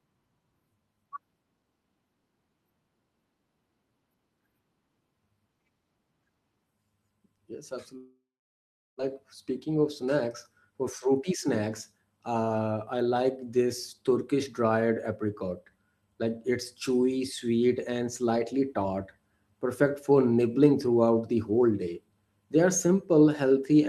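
A long network dropout, most likely a stretch in which no packets reached the receiver, interrupts the speech from 7.97 s to 9.15 s. About one second of the original audio is never played. The receiver first stretches the last sound into a buzzy or hissy tail that quickly fades. That leaves 0.75 s of plain silence before the speech picks up again further on, with the missing second simply gone.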